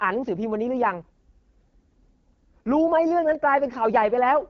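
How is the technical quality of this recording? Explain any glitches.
Quality is poor throughout, with one fault spanning the whole speech clip. The AMR wideband (HD Voice) codec roughens the speech: its low-rate vocal-tract model turns voicing raspy, a level of damage that fits about 8.85 kbit/s. On a spectrogram, energy stops sharply near 6.8 kHz.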